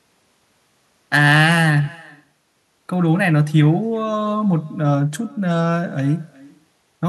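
Throughout the speech, an echo with no canceller trails every phrase. The far end is playing the call over a loudspeaker, its microphone catches that playback, and nothing subtracts it, so the talker's own speech returns after a round trip of roughly 400 ms. The copy sits about 26 dB below the direct sound, and sounds thin. Unlike ordinary room reverberation, which smears into a continuous decay, this arrives as a distinct, late repeat.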